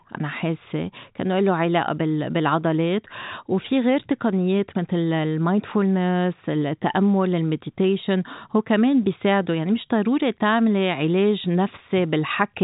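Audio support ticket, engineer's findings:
Nothing stood out on listening to this speech, which stays within the expected telephone band of a G.711 mu-law path with its top edge near 3.8 kHz.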